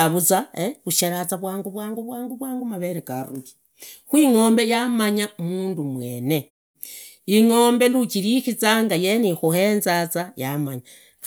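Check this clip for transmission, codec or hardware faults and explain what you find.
No transmission, codec or hardware faults turn up in this speech clip, and the muted pauses, where the background falls silent between phrases and comes back in time for the next sound, are working as intended.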